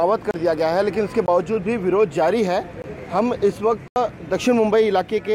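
Four blocks of digital silence drop into the sound, at 0.31–0.34 s (about 31 ms), 1.26–1.28 s and 2.82–2.84 s (20 ms each), and a longer 80 ms hole at 3.88–3.96 s. Each one cuts hard to silence and back with no fade. The short ones come across as brief holes, the last as an audible dropout, which points to the output buffer not being filled in time.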